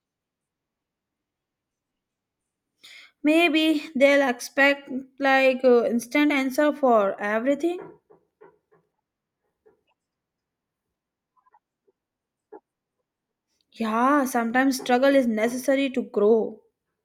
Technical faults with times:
none

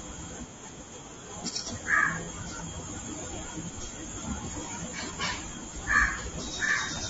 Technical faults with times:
0.00-7.10 low-delay AAC compression
2.24-2.29 AAC frame loss with concealment
6.65-6.70 AAC frame loss with concealment

